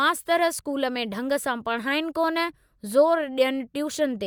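A short bit of speech, and nothing in it sounds technically wrong at all.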